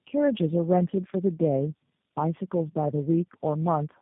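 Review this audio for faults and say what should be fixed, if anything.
Tandem speech coding runs through the whole clip. The speech sounds rough, muffled and warbly, as if it had passed through three low-rate speech coders in turn, which fits G.729A, AMR-NB and G.729A again, joined by G.711 links. Each coder rebuilt the previous one's errors. A spectrogram shows nothing above 3.7 kHz and smeared, blotchy harmonics. Carry the call end to end in one codec, without decoding at each network border.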